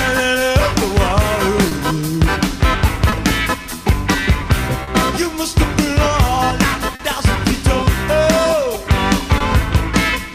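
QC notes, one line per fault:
Throughout: clock drift between sender and receiver. The sending clock runs roughly 2 percent slower than the receiving one, so the jitter buffer keeps draining faster than it refills. The receiver has to make up the shortfall by stretching or repeating small pieces of audio and, when it runs dry, by stalling briefly. The result is a recurring pattern of small timing hiccups spread unevenly across the clip.
0.32 to 4.44 s: repeated timing corrections. Across this stretch the receiver plays the sound at 99 percent speed, inserting short repeated fragments that add up to about 40 ms of extra material. Every edit pushes the same way, lengthening rather than cutting, because the slower sender leaves the buffer short. Each insertion is tiny, so the effect comes across as a faintly dragging, slightly unsteady tempo with occasional small hitches.
1.69, 3.10, 4.83, 6.95 and 9.38 s: short stall from a late packet. 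At each point a packet had not arrived when due, the buffer ran empty, and the receiver held the last sound until it came, then carried on from the same spot. The held segments are 20 ms at 1.69, 3.10 and 9.38 s and 40 ms at 4.83 and 6.95 s. Nothing is lost, and each is heard as a sound briefly sustained too long, with a slight buzz or dip.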